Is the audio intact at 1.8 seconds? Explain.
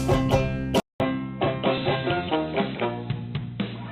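No. From 0.8 s to the end, the input has switched to a poorer device. A short silence of 200 ms marks the switch. After it, nothing above 4 kHz comes through, so the sound turns dull and boxy. The level stays about the same, and a faint new noise floor sits well below it. A change of microphone or a headset call profile is the likely cause.

At 1.78 to 1.86 s, frames are out of order. Two adjacent 40 ms blocks, each of two frames, were decoded in swapped order. This brief stretch plays with its halves exchanged. It gives a garbled flutter, and no time is lost.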